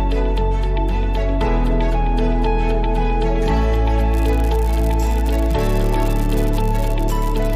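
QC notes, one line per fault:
4.13–7.56 s, unreliable data bit: one marginal data line starts flipping its bit in a random share of samples, so each error adds a spike of the same size, about -14 dBFS. Together they form a steady crackling fizz that runs through quiet gaps as well.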